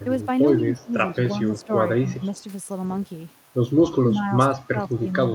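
The voice dips at 0.59 to 0.93 s (about 10 dB), 1.32 to 1.72 s (a lighter 5 dB), 1.96 to 2.35 s (about 15 dB), and from 3.85 s to the end, where it drops by around 30 dB. That's speech suppressed in double talk: the echo canceller likely mistook this talker for loudspeaker echo while the far side spoke and turned everything down. Two faint echo leaks also slip through, at 1.59 to 1.66 s and 2.38 to 2.42 s, each a quiet copy of the voice trailing by 141 ms and sitting roughly 30 to 35 dB under the speech. These are short scraps, likely residue the far end's canceller didn't remove from its loudspeaker pickup.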